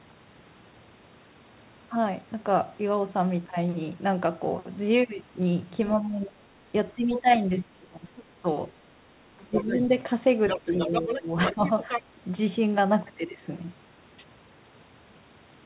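A speech recording carried over a narrowband call path, with nothing above 4 kHz, which fits G.711 A-law at 64 kbps. It shows speech suppressed in double talk: the talker's level drops sharply at 5.98–6.48 s (by about 25 dB), 6.95–8.47 s (about 20 dB), 9.36–9.71 s (about 15 dB) and 10.65–11.62 s (about 10 dB), heard as dips and partial cut-outs. The likely cause is an echo canceller that could not tell near-end speech from loudspeaker echo while both sides talked, so it attenuated everything. The other side's voice is also leaking through. Short scraps appear at 7.12–7.35 s and 9.55–9.79 s, roughly 10 dB under the talker, and a longer stretch runs from 10.45 to 12.02 s at only about 5 dB below. This is likely residual echo that the canceller failed to remove from the microphone signal, and it overlaps the same double-talk periods where the suppression occurs.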